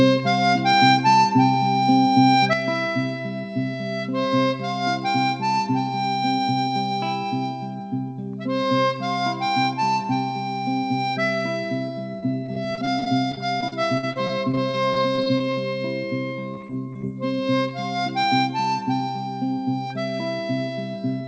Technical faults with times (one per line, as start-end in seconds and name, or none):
2.53-21.27 one channel drops out
12.20-15.56 repeated packet loss (robotic sound)
16.54-17.05 repeated packet loss (robotic sound)